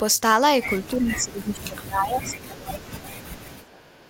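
From 0.94 s to 3.85 s, the talker's speech is suppressed in double talk. The likely cause is both ends speaking at once, leaving the echo canceller unable to tell this voice from the returning loudspeaker echo, so it pulled everything down together. Across roughly three seconds the voice sags, thins and breaks up in fragments, at its deepest falling by about 25 dB.

At 3.85 s an echo leak takes over and runs to the end of the clip. The far end's echo canceller likely left part of what its microphone captured from the loudspeaker, and that residue came back down the line. The result is a delayed copy of the speech trailing the original by 384 ms. It is very faint, around 35 dB below the direct voice.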